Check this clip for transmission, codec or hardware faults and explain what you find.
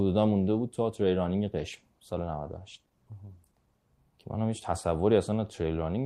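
There's one fault here: a call bitrate drop from 1.61 s to about 4.01 s. The link's bandwidth estimate fell, so the encoder had to squeeze the speech into far fewer bits. The sound points to a rate of roughly half the usual, something like 32 down to 15 kbps, held for about 2.3 s. With fewer bits, Opus quantises coarsely and trims the top end, so the speech goes rough, watery and muffled until quality comes back.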